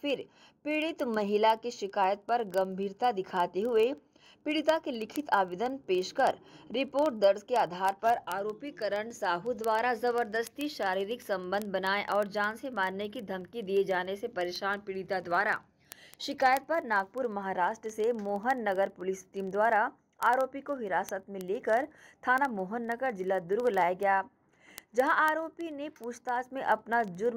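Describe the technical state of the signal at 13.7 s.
At 13.7 s the signal carries word clock ticks, which run through the whole span from 0.10 s to 27.36 s. The receiving device is clocked independently of the sender, with a mismatch of roughly 700 ppm, so one sample is slipped about every 0.04 s. This gives sharp ticks of uneven strength at a steady rate of about 25 per second. Random clicks or buffer dropouts would be irregular or leave audible gaps.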